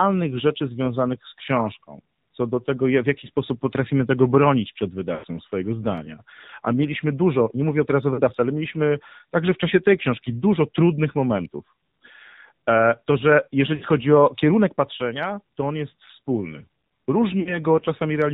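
The AMR narrowband mobile codec is audible throughout the speech. It samples at 8 kHz and rebuilds the voice from a vocal-tract model driven by sparse pulses, so nothing above 4 kHz survives. The plainly buzzy, synthetic timbre points to a low mode around 7.4 kbps.

Lost AMR speech frames occur from 5.14 to 5.27 s, 8.14 to 8.21 s, 13.76 to 13.86 s and 17.40 to 17.58 s. Failed frames make the decoder repeat its last good pitch and vocal-tract settings at falling gain. The voice smears, warbles and dips before recovering roughly. The longest gap, at 5.14 s, fits about five missing 20 ms frames.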